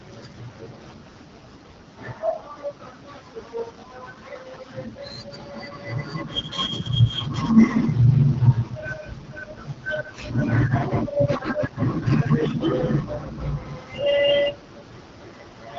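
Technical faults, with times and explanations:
Throughout: AMR wideband (HD Voice) codec. The speech passes through a low-rate AMR-WB coder, the rough, raspy texture pointing to one of its lowest modes such as 8.85 kbit/s. Its coding damage is plainly audible, and nothing remains above 7.5 kHz.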